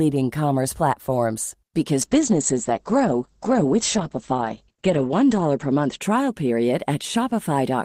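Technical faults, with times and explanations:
2.03 to 6.73 s, call bitrate drop: The speech turns rough and muffled, as if the encoder fell from around 32 kbps to around 9 kbps. Coarser coding adds a watery texture. The top end narrows from 20 kHz to 8 kHz, sounding worst for about 3.1 s before recovering.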